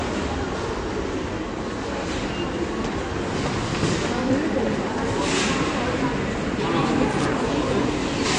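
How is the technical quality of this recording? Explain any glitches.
The technical quality is poor: the whole recording is band-limited and smeared, and it has two short bursts of crackle.

Throughout the clip, nothing sounds above 9.5 kHz, and the audio has a dull, smeared texture with a watery, fizzy edge on sustained and noisy sounds. The likely cause is AAC compression at a low bitrate, something like 32 kbps for AAC-LC. At that rate the encoder drops the top band and starves weaker frequency regions of bits. On a spectrogram this shows as a flat ceiling at 9.5 kHz, with blotchy holes and patchy texture below it.

At 4.10–4.22 s and again at 7.11–7.25 s, an irregular scratchy crackle cuts in. This is loose connector crackle: a worn or dirty contact briefly makes and breaks, chopping the signal. Each burst is heard as a rough scrape lasting about an eighth of a second. On the waveform it appears as a cluster of jagged spikes and dropouts, and on a spectrogram as ragged vertical streaks spanning the band.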